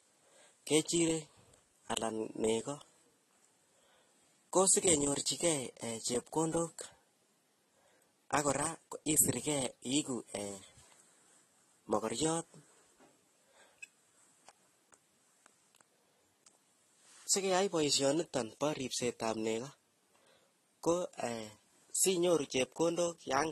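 All the way through the speech there's nothing above about 12.1 kHz, and two different kinds of codec artefacts are heard together. That mix points to transcoding between lossy codecs, likely a low-rate AAC-LC pass followed by a Vorbis encode. The second encoder wastes bits re-coding the first one's artefacts and adds its own, while the lowest band limit in the chain sticks.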